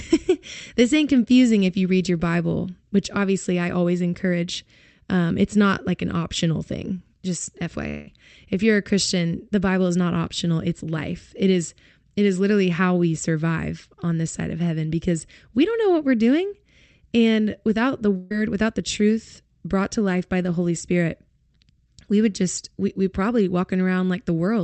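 Speech carried over a WebRTC call path, band-limited at 8 kHz, breaks up twice. From 7.88 to 8.08 s, about 190 ms of the audio is gone. The gap never falls silent. The last sound is carried on as a buzz or hiss that fades over roughly 180 ms before the speech resumes further along. The most likely cause is a long network dropout, with the receiver concealing the missing stretch instead of playing it. From 18.17 to 18.31 s, a burst of packet loss removes about 140 ms. The preceding sound is extended as a decaying held tone or hiss for around 140 ms, again with no silent portion, and the audio then picks up past the lost section.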